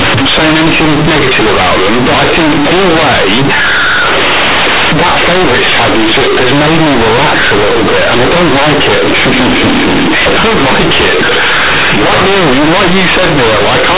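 From start to finish, A-law telephone bytes are played as plain linear 8-bit samples, companded audio read as linear with no expansion. Every sign change swings the output across half its range, so quiet passages become as large as loud ones and the speech becomes loud, buzzy distortion, with strong noise in the pauses.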